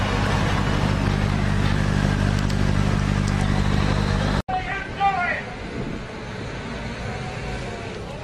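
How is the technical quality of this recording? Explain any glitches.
The recording has two bursts of DAB burbling, at 1.87–2.06 s and 4.28–4.80 s. Bit errors that slip past error correction, at a few tenths of a percent, corrupt MP2 samples and scale factors, making individual sub-bands jump for a frame. The result is short blips of noise and sudden sub-band level jumps over the sound.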